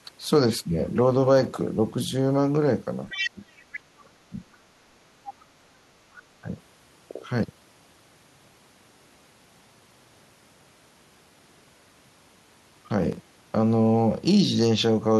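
From 3.09 to 3.31 s a second voice sits under the talker at only about 5 dB down: the other side's voice leaking through. The likely cause is loudspeaker echo the canceller failed to remove. On a spectrogram it appears as a fainter, overlapping harmonic stack. Further scraps follow at 3.58 to 3.80 s, 4.53 to 4.57 s, 5.27 to 5.45 s and 6.13 to 6.22 s, ranging from about 15 dB to about 40 dB below speech.

Between 3.34 and 4.35 s the talker dips hard, by up to about 30 dB across roughly 0.7 s. This is speech suppressed in double talk, likely the canceller ducking everything while both sides spoke. The waveform envelope caves in. A shorter dip of about 10 dB follows at 6.42 to 6.47 s.

From 13.13 to 13.5 s processor overload crackle tears across the sound. About seven missed deadlines, fitting roughly 10 ms buffers, each leave a silent gap with hard edges. These show as thin vertical dropouts in the waveform and broadband clicks on the spectrogram.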